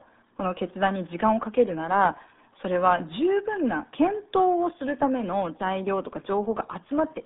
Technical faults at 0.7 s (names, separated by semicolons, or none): RealAudio 14.4 codec